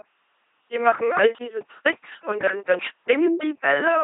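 Throughout, the speech carries heavy LPC-10 vocoder damage: each moment is rebuilt as pure buzz or pure hiss through a short filter at 2.4 kbit/s, giving a mechanical robotic voice with nothing above 3.9 kHz.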